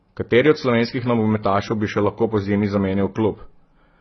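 From start to finish the speech carries heavy AAC compression damage, likely from AAC-LC coding at a very low bitrate, with the density of artefacts fitting something around 16 kbps. Nothing survives above 6 kHz, so sibilants lose their edge and the whole clip sounds dull. Starved of bits, the encoder quantises the remaining bands coarsely and leaves gaps in the spectrum, which gives sustained sounds a warbling, smeared texture and makes fricatives fizzy rather than crisp.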